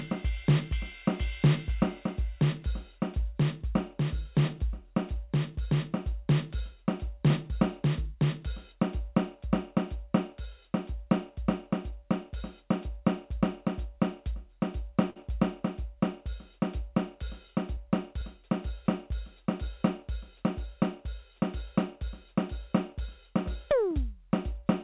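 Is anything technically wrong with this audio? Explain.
Yes, there is one fault in this music. A short stall from a late packet at 15.10 to 15.18 s: the jitter buffer ran dry, so the last sound was stretched for about 57 ms until the packet arrived. Nothing is lost, but that moment hangs slightly too long and everything after it sits 57 ms later. Throughout the clip, the G.711 A-law call path leaves nothing above 4 kHz.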